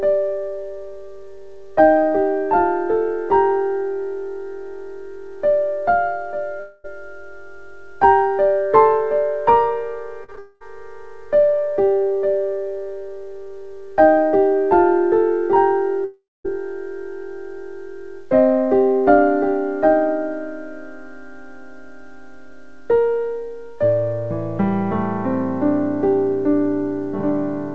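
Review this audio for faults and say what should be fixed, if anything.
At 6.60 to 6.86 s and 10.39 to 10.62 s the sound turns into a fading buzz for about a quarter of a second, then resumes further on. At 16.04 to 16.46 s the buzz dies away into about 210 ms of silence before the audio returns. These are long network dropouts, likely from the network delivering nothing for 240, 220 and 400 ms. The receiver stretched the last sound to cover the gap, and that stretch of audio is gone. To prevent this, fix the unstable link or add redundancy such as FEC so that long gaps are recovered instead of filled.

Just before the 10.39 s dropout, three brief smears or wobbles occur at 10.24 to 10.30 s, 10.32 s and 10.35 to 10.39 s. These are short concealed packet losses of 40, 20 and 20 ms. The decoder continued the last sound to bridge each hole and then blended back into the real audio, so any short sound in those spots may have vanished. 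The G.722 call path, which carries nothing above 8 kHz, delivers these losses as they arrive. To prevent this, reduce packet loss on the link or enable in-band FEC, which rebuilds short gaps from redundant data instead of guessing at them.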